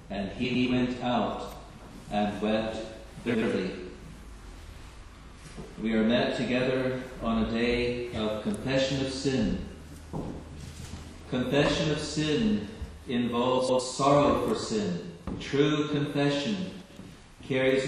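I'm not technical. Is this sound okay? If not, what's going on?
No. There are frames out of order. In five short spots, two tiny neighbouring pieces of sound play swapped. That causes a brief garbled flutter. It happens at 0.44, 1.69, 3.26, 13.58 and 16.82 seconds, each swap lasting about 0.16 to 0.22 seconds.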